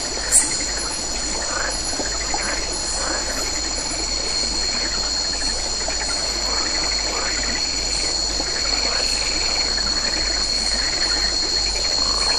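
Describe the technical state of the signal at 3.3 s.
At 3.3 s the signal is intact, with no audible fault at that point.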